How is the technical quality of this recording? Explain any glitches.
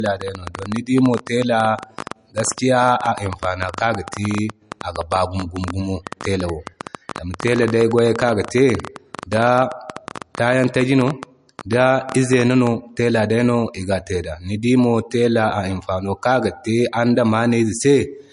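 The recording has two clear problems: a dull, band-limited sound throughout and a long stretch of ticking over the speech.

Throughout the clip the audio is low-bitrate audio saved at a high bitrate. Nothing is present above 10.6 kHz, and the smeared, swirly MP3 artefacts point to a low-rate encode near 40 kbit/s, likely later re-saved at a high rate. That is why the file sounds poor despite its size.

From 0.06 s to 12.68 s a train of clicks runs over the speech and the pauses alike. The clicks come about 11.7 per second at an uneven pace, roughly 150 in all, peaking around 10 dB above the speech. They are likely interference or a faulty connection or power supply, not damage in the recording itself.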